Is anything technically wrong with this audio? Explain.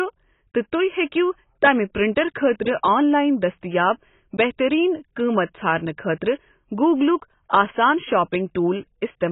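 Yes. Throughout the speech, nothing is present above 3.8 kHz, and the remaining band sounds smeared and warbly, with fizzy sibilants. That points to heavy AAC compression, likely AAC-LC at a low bitrate near 16 kbps, where the encoder drops the top band and quantises coarsely.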